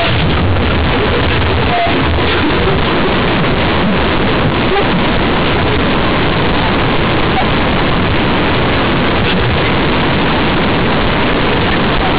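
Throughout, A-law bytes are played as linear 8-bit samples without expansion: companded audio read as linear. Each sign change swings across half the output range, so the speech is blaring and buzzy, quiet passages match loud ones, and pauses fill with heavy noise.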